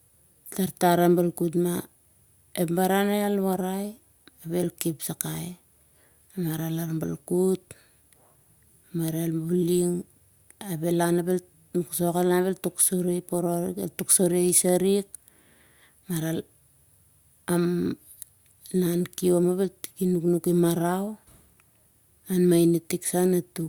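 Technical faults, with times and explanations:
No technical faults can be heard in this speech clip.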